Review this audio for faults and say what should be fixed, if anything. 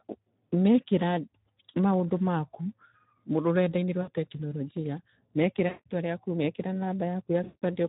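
Speex codec: the encoder has too few bits for the excitation, which fits a rate near 11 kbps, so the speech sounds plainly hoarse and noisy throughout.

VoIP packet loss concealed by the speech codec: packets went missing at 4.02 to 4.10 s (60 ms, just before "tekinoronjia mekĩra"), 5.67 to 5.86 s (180 ms, just after "tekinoronjia mekĩra") and 7.43 to 7.64 s (180 ms). Each time the decoder repeated its last pitch and filter at falling gain, so the sound smears and fades out and stays weak briefly afterwards.

To prevent both, run a higher Speex quality setting or a more modern codec, and add a jitter buffer with forward error correction or redundancy on the network path.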